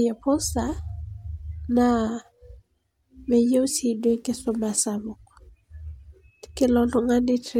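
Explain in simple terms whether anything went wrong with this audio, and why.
Listening through the recording, nothing stood out as having gone wrong with the audio.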